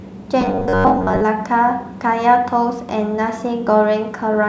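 Speech clip, and from 0.41 to 1.23 s it goes into a robotic sound from repeated short buffers: the voice flattens into a stiff, metallic buzz pitched at about 94.1 Hz that only loosely tracks what's being said. That's likely a playback path starved of fresh audio, looping a roughly 10.6 ms chunk over and over, so most of that stretch is repeats while the real material in between gets skipped.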